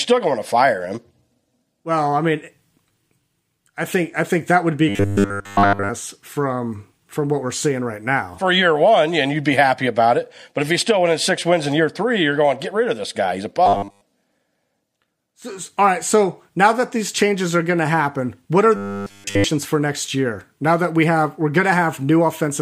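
At 4.89 to 5.9 s, 13.66 to 14.01 s and 18.76 to 19.44 s the speech turns into a rigid, metallic 100 Hz buzz that only loosely follows the words. This is robotic sound from repeated short buffers. The first and last stretches are repeats throughout, and the middle one mostly so. The likely cause is audio arriving too seldom, with roughly 10 ms of the last buffer replayed over and over while the real signal is skipped.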